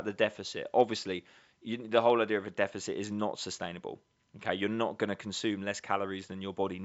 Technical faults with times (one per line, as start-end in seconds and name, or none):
none